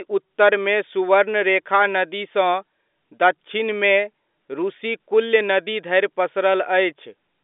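Nothing technically wrong turns up in this bit of speech; there are no faults to point to anywhere along it.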